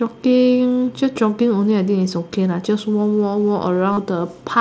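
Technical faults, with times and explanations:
3.93–3.97 s, concealed Bluetooth headset packet loss: about 45 ms of voice packets failed to arrive, which fits six lost frames in a row. The phone patched the gap by looping the best-matching recent waveform, giving a brief buzzy held tone and a small warble as speech returns.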